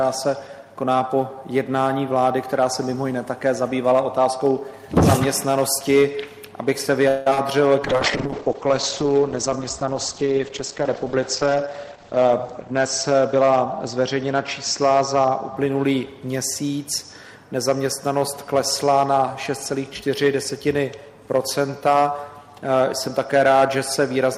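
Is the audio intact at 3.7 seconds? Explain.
No. At 3.7 seconds, as throughout the clip, there is hard clipping: the signal is driven about 6 dB past what the stage can pass, so peaks are sliced flat. A small share of samples are cut off, adding high harmonics heard as crackle on the loudest moments.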